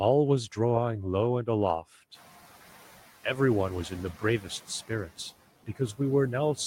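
Noise suppressor artifacts run throughout. The suppressor pushes steady background down by about 10 dB, even after room noise rises near 2 s.

Between 5.66 and 6.0 s, speech is cut by the noise suppressor. It treats quiet speech as noise and drops it up to about 15 dB. About a tenth of a second sounds swallowed.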